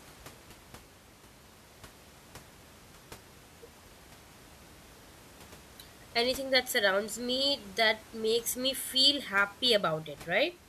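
No technical faults can be heard anywhere in this speech recording. The only thing beneath the voice is the room's own background noise, sitting about 23 dB below the speech, which belongs to the recording space rather than the system.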